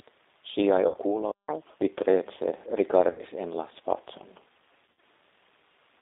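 Throughout, the sound is squeezed into a telephone band of about 300 Hz to 3.7 kHz and carries the rough, slightly synthetic grain of G.729 coding, which fits an 8 kbit/s codec. That artificial rasp is what separates it from simple band-limiting.

From 0.88 to 0.96 s, 60 ms of audio is lost and hidden by the speech codec's packet loss concealment. The decoder repeats its last pitch and filter, so the sound smears into a fading buzzy tone or coloured noise rather than dropping to silence.

From 1.48 to 1.81 s comes catch-up at higher speed. The backlog plays 1.5 times faster, and pitch climbs roughly seven semitones with it. Time-stretching would keep the pitch steady, but here speed and pitch rise together.

The same concealment recurs from 3.11 to 3.24 s over an 80 ms gap. It returns from 4.86 to 5.02 s, where 120 ms is lost in pieces across 160 ms with a longest run of 80 ms. Each gap leaves the voice weak or distorted for a while after the loss ends.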